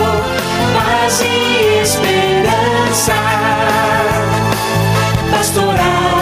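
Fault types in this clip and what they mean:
Gain pumping: The swing is around 5 dB. Loud and soft passages sit closer together than they should, so the sound feels squashed. The likely cause is input gain set far too high, with a fast limiter or compressor clamping down on every peak.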